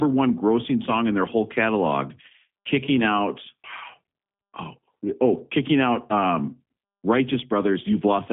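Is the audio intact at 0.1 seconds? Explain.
No. From the first instant, including 0.1 s, the speech has passed through a G.729 codec, which fits an 8 kbit/s G.729A stream. Instead of carrying the waveform, it rebuilds each 10 ms frame from a vocal tract filter, a pitch predictor and a few sparse pulses, within a telephone band of 150 Hz to 3.5 kHz. Nothing is left above 3.5 kHz, so the speech sounds muffled and plainly rough and synthetic throughout.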